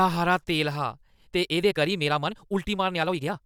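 Right after "हारा तेल हा", at about 1.08 s, the pace suddenly jumps and stays that way to the end of the clip at 3.46 s. It's a time-stretched section running at roughly 1.81 times normal speed, yet the pitch doesn't rise with it. It sounds rushed, which likely comes from software squeezing the audio to fit a shorter length by dropping little slices while holding pitch steady.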